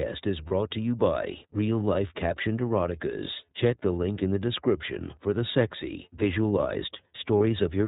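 Speech, carried throughout by the iLBC codec, and the coding damage is plainly audible. The band stops at 4 kHz, so sibilants and upper harmonics are missing, and the voiced sound has the slightly rough, synthetic texture of a low-rate excitation coder. iLBC codes each frame's excitation independently of the previous one, trading some naturalness for resilience. The character fits its 13.33 kbps mode with 30 ms frames. There are also two brief dropouts from lost iLBC frames, at 0.47–0.52 s, just before "to you by", and at 7.38–7.41 s. Each gap matches a single missing 30 ms frame. Lacking real data, the decoder repeats the last pitch cycle blended with noise, so each gap comes out as a short, slightly buzzy held vowel sound rather than silence. Because every iLBC frame decodes on its own, the speech is intact again immediately after each gap, with no smeared recovery.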